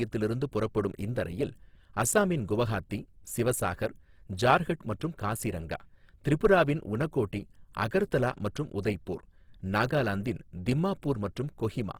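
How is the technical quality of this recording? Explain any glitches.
The recording has plainly audible codec damage from start to finish.

Opus compression runs through the whole speech clip, and the likely cause is Opus in its CELT music mode at a very low rate, consistent with about 16 kbps. The encoder preserves each band's energy but, short of bits, fills band detail with folded or noise-like content, so tones lose their clean structure and turn rough and grainy. A spectrogram shows full bandwidth up to about 20.4 kHz with blurred, speckled harmonics rather than clear gaps.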